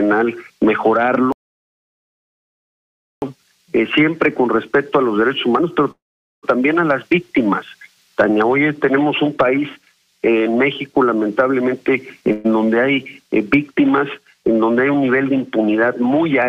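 At 1.32 s the player likely ran short of data, a playback stall: the sound cuts off mid-flow and stays silent for about 1.9 s before resuming at 3.22 s.

From 5.91 s to 6.45 s, a call audio freeze, likely from packets held up in transit that emptied the jitter buffer. The last sound is stretched into a brief fading buzz, then silence for about 0.44 s. The audio picks up where it stopped, so about 0.52 s of gap is inserted and nothing is lost.

Between 11.64 s and 12.32 s a jitter buffer speed-up trims short pitch-period slices to shed roughly 150 ms of excess delay. The sound runs at about 118% speed with its pitch unchanged and comes across as hurried. At 12.32 s a second freeze follows, likely from another brief packet delay, and fills about 0.12 s with a continued buzz before the audio carries on at 12.46 s without loss.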